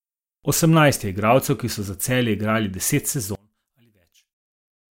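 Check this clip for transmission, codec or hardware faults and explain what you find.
One fault is present. From 3.35 s to the end, the speech drops by about 32 dB and nearly vanishes. The likely cause is one channel inverted. One stereo side has flipped polarity. When both sides are summed to mono, the shared centre cancels.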